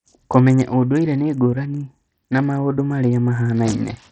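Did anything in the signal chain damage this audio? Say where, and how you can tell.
Yes: throughout, the speech sounds gritty, with treble that flickers and drops out, likely from Bluetooth SBC compression at the codec stage, its starved upper sub-bands fitting roughly 64 kbps.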